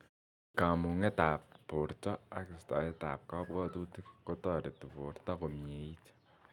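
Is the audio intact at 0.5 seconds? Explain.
No, there's a clipped start after a pause at 0.46 to 0.54 s. The output wakes late from silence and swallows 84 ms, so the speech jumps in abruptly.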